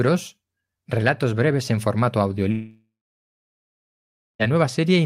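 Speech, where just after "relatos breves en formato", at 2.51 s, the sound smears into a fading buzz or hiss, then goes silent for about 1.5 s. At 4.49 s it resumes with that stretch missing. This is likely a long network dropout: the receiver's concealment ran out while nothing arrived.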